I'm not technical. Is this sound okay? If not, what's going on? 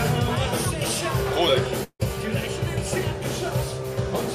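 No. At 1.83 s the sound turns into a fading buzz for about 0.16 s, goes briefly silent, and resumes at 2.02 s with roughly 0.16 s skipped. This is likely a long network dropout: audio stopped arriving, the receiver padded the gap, and the lost part never played.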